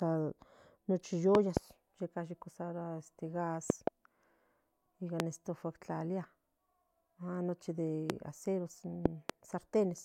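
Speech marred by loud pops: double pops at 1.35–1.59 s, 3.70–3.90 s and 9.06–9.32 s, single ones at 5.20 s and 8.10 s, peaking about 25 dB above the speech (about 20 dB at 8.10 s). Likely voltage spikes from a plug, switch or static. Unlike dropouts, the speech continues underneath.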